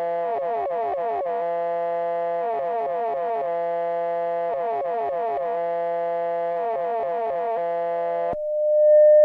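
At 7.92 s, loudspeaker feedback squeal: the microphone re-amplifies its loudspeaker at 604 Hz, a tone swelling over about a second, one bright spectrogram line.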